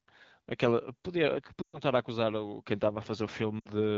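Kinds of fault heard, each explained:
Lost AMR speech frames: Radio errors corrupted stretches of the wideband AMR stream, so the decoder filled the gaps by repeating the last good pitch and vocal tract settings at falling gain. Near 1.61 to 1.79 s the sound smears and fades (about 120 ms, fitting six 20 ms frames), then again at 3.60 to 3.68 s (about 60 ms). The waveform shows a tapering envelope, and the spectrogram shows flattened, smeared harmonics that dim before speech returns.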